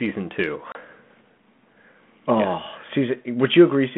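A speech clip that suffers packet loss on an ADPCM call: around 0.72 s a few packets, about 30 ms of audio, drop out and are filled with silence, leaving a hard-edged gap that ends at 0.77 s. Because the decoder's adaptive predictor and step size lose step with the sender's, speech resumes with slight distortion before settling. The band-limited 150 Hz to 3.4 kHz G.726 ADPCM sound, lightly coloured, fits 32 kbit/s.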